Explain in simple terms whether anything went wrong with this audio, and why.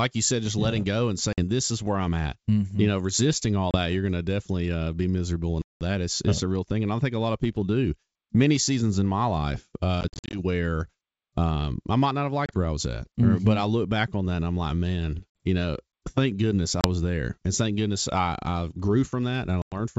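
Yes, the call suffers packet loss on an ADPCM call, heard as sudden hard-edged gaps at 1.33, 3.71, 5.62, 10.01, 12.46, 15.37, 16.81 and 19.62 s. Most last 30 to 50 ms, the one at 5.62 s about 190 ms. Around 10.0 to 10.4 s, after "seasons in my life", several short holes cluster. Unlike a simple dropout, the sound comes back briefly slightly distorted while the decoder's step size catches up. The clear wideband G.722 sound is fine.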